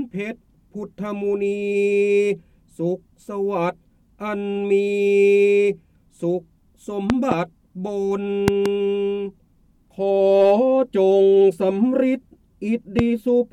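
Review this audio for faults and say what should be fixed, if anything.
Loud pops at 7.10–7.34 s and 8.48–8.68 s (double pops) and 12.99–13.01 s (single), well above the sound, likely from switching transients or static. Prevent them by muting outputs before switching or connecting gear and grounding equipment properly.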